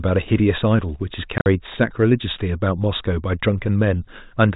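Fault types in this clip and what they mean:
Packet loss filled with silence: Lost packets were replaced by silence. Hard-edged gaps totalling 70 ms chop the speech between 1.38 and 1.46 s. The longest gap is 50 ms.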